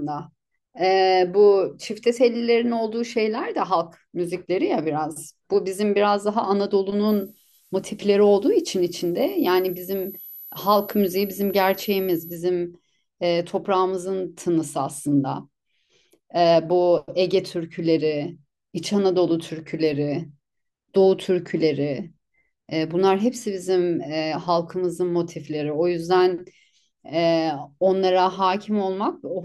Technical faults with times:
7.09-12.35 switching supply whistle

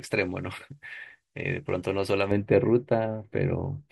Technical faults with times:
0.00-2.31 pre-emphasis left on

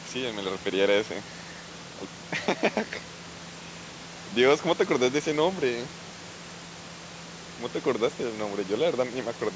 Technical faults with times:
none

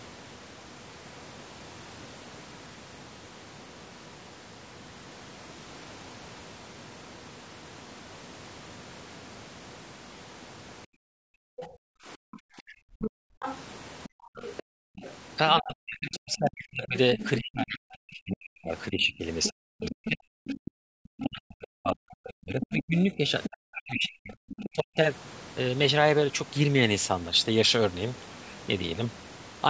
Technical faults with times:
10.86-11.31 background gated by the echo canceller
11.59-25.00 speech suppressed in double talk
11.61-17.30 other side's voice leaking through
14.69-15.00 background gated by the echo canceller
19.43-24.69 other side's voice leaking through

